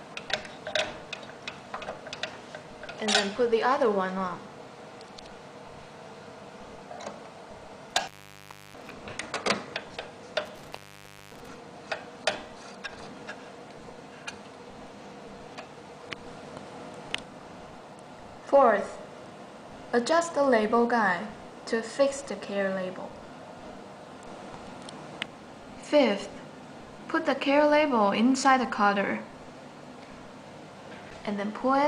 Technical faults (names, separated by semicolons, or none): intermittent contact